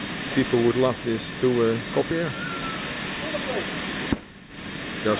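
At 2.11 s there's a skip ahead. Playback jumps forward with no gap at all, and about half a second of audio just isn't there. It sounds like a splice, with the two sides butted straight together. That's what you get when a chunk is lost or discarded while later audio is already queued up, so the receiver simply carries on from what it has. The sudden jump also takes roughly half a second out of the playout delay in one go.

From 2.23 s to 4.58 s there's a jitter buffer speed-up, running at about 108% speed. The buffer was holding more than it wanted, so the receiver kept snipping out short pitch-period-sized pieces to catch up, about a fifth of a second in total across that stretch. The pitch stays put, but the sound has a slightly hurried, pushed-along feel. It's band-limited to 4 kHz throughout, as you'd expect from the G.711 A-law call path it came through.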